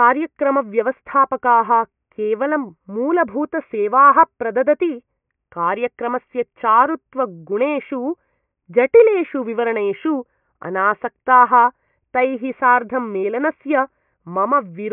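No technical faults are audible.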